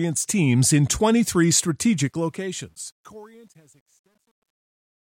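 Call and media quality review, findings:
Truncation distortion on fade-out, 2.02 to 5.06 s. Fade/gain stage requantizes without dither, consistent with an effective 10-bit word length. As the fade-out from about 2 s lowers the level, the speech waveform collapses into a few coarse square steps. Audible grit on the decaying speech, worst 2.95 to 5.06 s. Probable component: final gain or fade stage.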